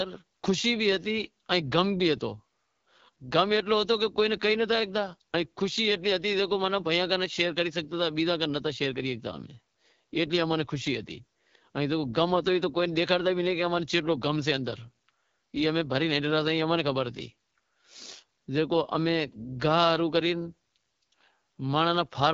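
Speech coded throughout with the AMR wideband (HD Voice) codec: plainly raspy and rough, which fits a low rate near 8.85 kbit/s. Unlike narrowband telephony, the band extends to about 7 kHz.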